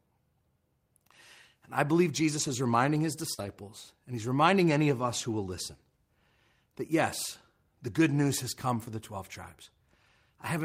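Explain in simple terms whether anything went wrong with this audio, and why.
Two kinds of network fault occur in this speech. At 2.39 to 2.49 s, just after "I believe", and again at 3.38 to 3.48 s, just before "and he's reminding any", there is lost packet rebuilt from error correction. Backup copies patched these dropouts, so the speech carries on without a gap but sounds rougher and noisier.

At about 3.33 to 3.40 s, after "is reminding his", there is a burst of packet loss. Unlike the patched spots, this one drops about 40 ms of speech. The last sound is stretched and fades during the gap, and then the speech jumps ahead.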